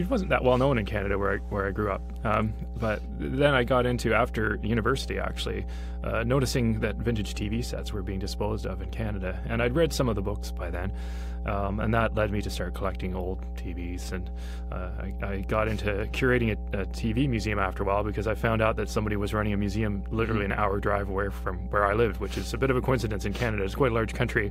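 A steady mains hum runs under the audio from start to finish, a fixed low tone at 60 Hz with some low harmonics above it, sitting nearly as loud as the wanted sound. The power line is leaking into the signal, most plausibly through a ground loop or a nearby transformer. Unlike low-frequency rumble from handling or wind, which is broadband and shifting, this is a single stable pitch that never wavers, which marks it as electrical.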